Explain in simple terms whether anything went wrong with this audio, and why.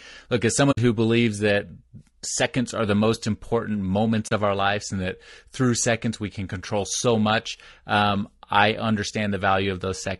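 Low-delay AAC compression, heard throughout the clip: the speech sounds rough and grainy, with a hiss between the tones of the voice and a thin, artificial top end. This likely comes from the low-delay AAC used in video calls, squeezed into too little data to capture a voice's tones cleanly.

AAC frame loss with muting, at 0.71 s and 4.27 s: the sound briefly fades to silence for about 60 ms just before "who believes that seconds", then for about 40 ms between "are the most important" and "of our lives and". Pieces of the stream went missing, and the decoder replaced them with silence, so each gap fades out and back in softly.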